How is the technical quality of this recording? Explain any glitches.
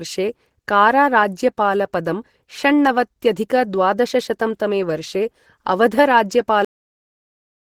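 The recording is compromised, with two glitches. Throughout, the speech sounds muffled, hoarse and grainy, likely from Opus compression in its hybrid speech mode at a low bitrate, around 16 kbps. At 6.65 s, the audio stops mid-sound and drops straight to digital silence with no decay: a cut-off end, where the final buffers were never written or played.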